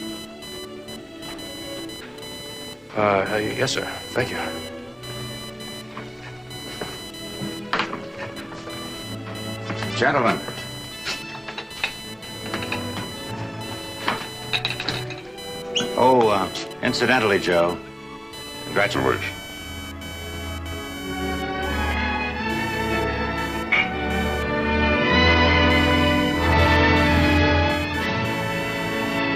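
From start to finish, computer activity noise sits under the audio. It is a buzzing chirp pulsing around 1 kHz, roughly 15 dB below the sound. Processor or mouse load shifts the shared ground. The noise follows that activity, not the audio.

From 18.95 s to the end at 29.35 s, a section plays at the wrong speed. It runs at 0.758 times normal speed. Pitch drops about five semitones, so everything turns deep and slow. The likely cause is playback fitted to the wrong clock.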